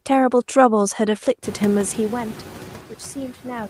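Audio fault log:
Throughout, noise suppressor artifacts: the suppressor takes only about 3 dB off what it treats as steady noise, band by band, so the noise dips slightly between words and swells back under them, clearest after the room noise climbs around 1.5 s.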